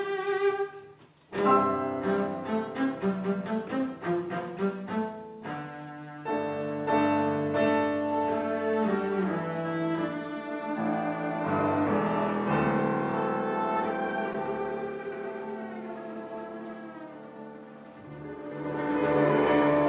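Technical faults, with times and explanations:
14.33 s, short concealed packet loss: about 10 ms of audio missed the decoder's deadline, so the receiver stretched the preceding sound to fill 9 ms of the gap and blended back into the real signal. The result is a momentary wobble or smear in the G.711 call audio, which carries nothing above 4 kHz.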